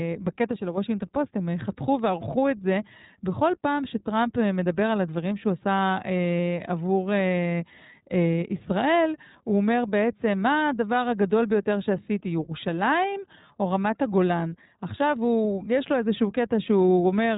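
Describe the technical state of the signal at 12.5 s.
iLBC codec coding is present at 12.5 s, as it is across the whole clip. The codec works on short blocks of the speech and rebuilds the excitation for each one independently rather than carrying detail over from the previous block. The block character points to 20 ms frames and a rate near 15.2 kbps. The damage is plainly audible: the speech sounds slightly rough and synthetic, and nothing above 3.8 kHz survives, leaving a narrow, telephone-like band.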